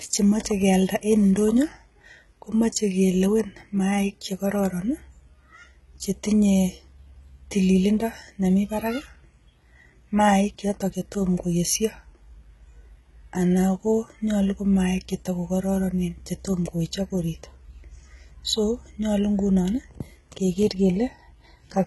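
From start to finish, the speech has a gritty, metallic treble, with s sounds turned lispy, and nothing above 11.8 kHz. The damage is heavy and points to a low bitrate around 16 kbps, likely HE-AAC compression rebuilding the treble from copied lower bands.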